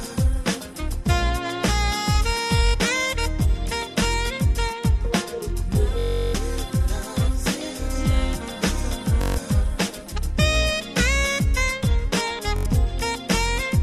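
Bluetooth stutter at 2.67–2.75, 5.99–6.35, 9.22–9.38 and 12.56–12.66 s: lost packets make the receiver loop a roughly 21 ms slice, so you get a machine-gun buzz, longest near 6 s, then the sound jumps ahead.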